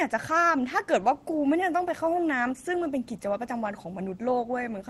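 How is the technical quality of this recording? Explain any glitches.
No glitches here; the call audio comes through intact.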